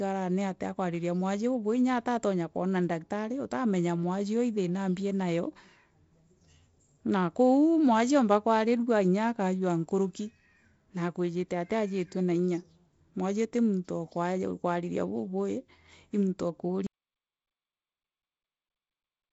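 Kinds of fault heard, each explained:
Audio dropout to silence: At 16.87 s the speech stops abruptly and the clip falls into silence. The silence holds through to the end. There is no room tone, only silence. This was likely caused by the input being lost, through a disconnected device, a failed link or a mute, while recording carried on. Anything said after that point is gone. The G.722 wideband band limit near 7.7 kHz is audible before the cut.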